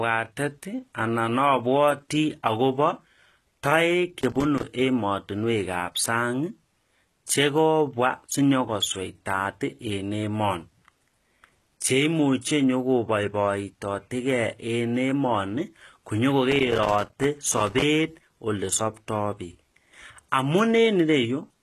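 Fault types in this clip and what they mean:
HE-AAC compression: The encoding chain likely used HE-AAC, which codes only the lower spectrum and builds the treble by copying lower bands upward under a coarse envelope. The damage is plainly audible throughout the speech. Nothing sits above 12.4 kHz, and the rebuilt top end does not match the original, so its harmonics do not line up with those below the crossover. The bandwidth fits a low bitrate around 16 kbps.
loose connector crackle: A worn or dirty contact in the signal path made and broke connection as it moved, chopping the audio on and off at irregular intervals. In this clip that shows as two bursts of scratchy crackle over the speech. The first runs from 4.20 to 4.64 s. The second, longer one runs from 16.51 to 17.83 s. The sound between bursts carries no crackle.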